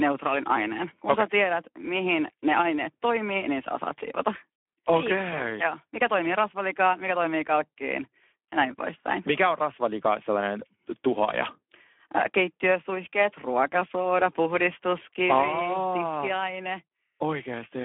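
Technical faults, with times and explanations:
Throughout: Speex codec. The speech sounds hoarse and grainy, and it is boxed into a telephone-like band from about 250 Hz to 3.4 kHz, with nothing above 3.7 kHz. The damage is plainly audible. It comes from Speex running at a low setting, which fits a bitrate near 11 kbps. That leaves too few bits to model the excitation of the voice, so it is rebuilt roughly and turns noisy.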